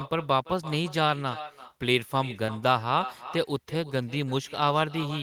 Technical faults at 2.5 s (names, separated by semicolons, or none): echo with no canceller; short concealed packet loss